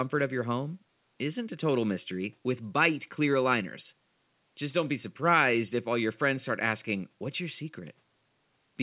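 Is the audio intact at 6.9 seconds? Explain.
Yes, the speech at 6.9 seconds is intact, with nothing interrupting or disturbing it there beyond the faint room noise well below the voice and the narrowed band of the call path, which cuts off everything above 4 kHz.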